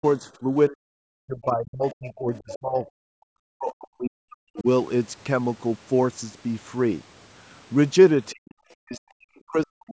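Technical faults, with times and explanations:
0.00–3.02 s, 3.57–4.66 s, 8.31–8.59 s and 8.82–9.94 s, speech suppressed in double talk: the speech sinks by as much as about 40 dB. Both ends were likely talking at once, and the echo canceller ducked everything. Unlike leakage, speech is removed here rather than added.
1.90–1.95 s, 2.36–2.57 s, 2.85–2.90 s and 4.58–4.62 s, other side's voice leaking through: brief scraps of a second voice sit about 15 to 30 dB under the speech. This is likely loudspeaker echo that the canceller missed. It adds foreign sound inside the suppressed stretches rather than cutting the main voice.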